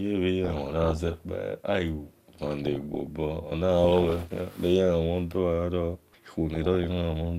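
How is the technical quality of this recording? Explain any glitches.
The speech is marred by DAB burbling in four bursts: 0.44 to 1.24 s, 2.13 to 3.07 s, 3.84 to 4.37 s, and 6.55 to 6.92 s. Weak reception lets bit errors, around one percent at worst, slip past error correction into the MP2 data. Corrupted samples put short blips of noise in single sub-bands, and corrupted scale factors make sub-bands jump in level for up to a frame. The result is burbling blips of noise over the speech.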